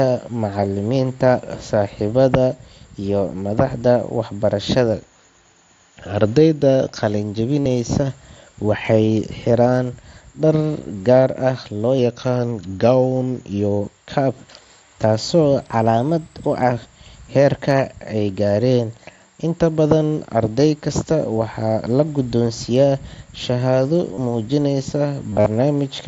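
At 4.93 s the speech suddenly slows by about 6% and sags roughly a semitone (about 107 cents) flat, holding there until 6.95 s. It's likely a drift correction step, where clock-matching software jumps the playback rate to refill its buffer. The same drop returns from 11.99 to 13.81 s. From 15.62 to 16.72 s it goes the other way, running 6% fast and about a semitone sharp, as the buffer gets drained back down.

There's also concealed Bluetooth headset packet loss. At 7.61 to 7.66 s about 52 ms of audio went missing between headset and phone, and the receiver patched the gap by repeating recent waveform, so you get a brief buzzy smear. A shorter 30 ms patch sits at 24.15 to 24.18 s. At 25.30 to 25.46 s about 128 ms is lost in bits spread over 165 ms, the longest run 45 ms, which gives a choppy buzz with a little warble as real audio returns. All of this rides on mSBC headset audio, which passes speech up to 8 kHz.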